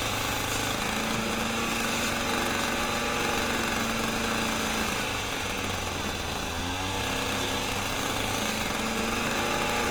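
Throughout the clip the audio has likely passed through Opus compression in its music (CELT) mode at a low rate, with a grain that fits something around 24 kbps. Short of bits, the encoder keeps each band's overall energy but refills detail by copying lower bands or injecting noise. The damage is plainly audible: the sound turns rough, grainy and noisy rather than swirling, though the bandwidth stays full, reaching about 20.1 kHz.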